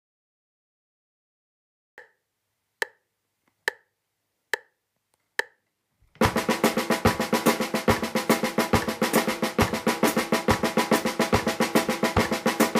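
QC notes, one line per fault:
0.00 to 1.98 s, cut-off start: flat digital silence, then sound enters mid-event with no attack, a sudden amplitude jump and a hard vertical spectrogram edge.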